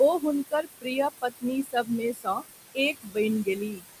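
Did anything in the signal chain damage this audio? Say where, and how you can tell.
Yes. The call-processing stage's noise suppressor leaves noise suppressor artifacts throughout. Room noise, sitting about 9 dB under the speech, is pushed down by about 18 dB between phrases and swells back beneath them. On a spectrogram the noise floor blinks in patchy, fluttering bands.

The same suppressor causes speech cut by the noise suppressor at 0.44–0.87 s, 1.63–1.9 s, 2.13–2.44 s and 2.94–3.17 s. Quiet speech taken for noise dips by about 20, 13, 14 and 14 dB, swallowing roughly 150–200 ms each time. The waveform shows abrupt notches, and the affected speech energy fades on the spectrogram.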